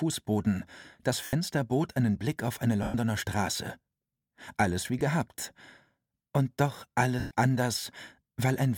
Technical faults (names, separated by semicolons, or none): lost LE Audio frames